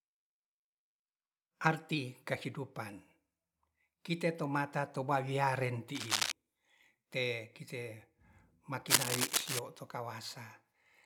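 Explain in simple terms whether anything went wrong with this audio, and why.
Yes, twice something went wrong: cable scratch noise, from 5.95 to 6.32 s and from 8.87 to 9.59 s. Each is a short, rough burst of scratching laid over the speech, about as loud as the speech the first time and louder than it the second. A worn cable or plug being moved is the likely cause. Unlike a single click or a brief dropout, it is a dense, uneven rustle that lasts a moment.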